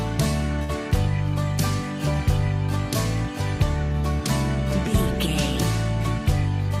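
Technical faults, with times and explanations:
0.63–0.72 s: short stall from a late packet. A packet arrived after its playout time, so the jitter buffer ran dry and the receiver filled about 54 ms by stretching the sound it already had instead of skipping ahead. When the packet turned up, playback resumed exactly where it had paused, so nothing is lost. The cost is a moment held too long, with a faint buzzy or dipped quality, and everything after it plays about 54 ms later.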